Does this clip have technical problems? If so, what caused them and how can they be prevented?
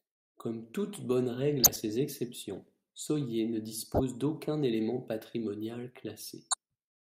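Yes. Corrupt frames were decoded at 1.63 to 1.78 s, just after "toute bonne règle", at 3.94 to 4.01 s, just before "d’aucun élément patrimonial", and at 6.51 to 6.55 s, right after "d’aucun élément patrimonial". Bit errors in the compressed speech frames were decoded anyway, so misread gains and codes placed energy at wrong frequencies. Each event is a short glitch lasting two to seven frames, peaking around -10 dBFS in the first and about -15 dBFS in the others. Error detection with concealment or retransmission, instead of decoding damaged frames, would prevent this.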